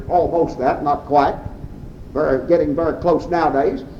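No audible technical faults present.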